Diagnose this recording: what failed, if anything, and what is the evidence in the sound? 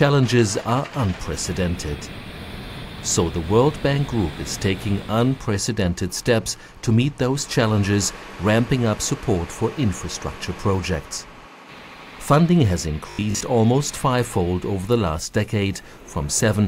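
From 13.11 to 13.41 s the sound collapses into a rigid, metallic buzz at 50 Hz, robotic sound from repeated short buffers, most of that stretch being repeats rather than fresh audio. The likely failure is at the driver or buffer stage: input arrived late, and the last 20 ms block was replayed in its place, imposing a 50 Hz period. A spectrogram shows harmonic lines every 50 Hz; the waveform shows identical 20 ms cycles.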